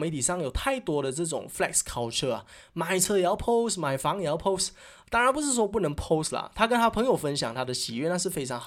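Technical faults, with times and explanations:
3.05 s, block of digital silence: a single sharp tick cuts into the speech, where 5.8 ms of audio drops straight to zero and back with no fade. The abrupt edges make the click, and the gap fits a 256-sample output buffer left unfilled.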